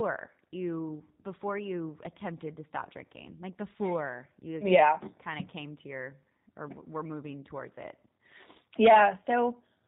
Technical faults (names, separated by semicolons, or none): G.729 codec